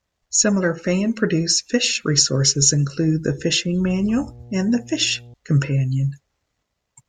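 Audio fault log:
3.84–5.34 s, mains hum: a ground loop or nearby transformer couples the 60 Hz power line into the signal path for about 1.5 s, laying a steady low drone with some low harmonics under the speech, roughly 20 dB below it.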